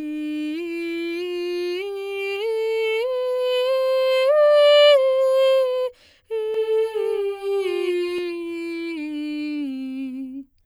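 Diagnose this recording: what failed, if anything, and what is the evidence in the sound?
A doubled audio track runs from 6.54 s to 8.18 s: the music is joined by a second, full-band copy of itself, about as loud as the original and trailing it by roughly 200 ms. The copy has no decay or room colour, and it cuts in and out abruptly at those times. The stage is likely the capture or editing path, where either a slower second route recorded the same signal or an edit left two out-of-step copies overlapping.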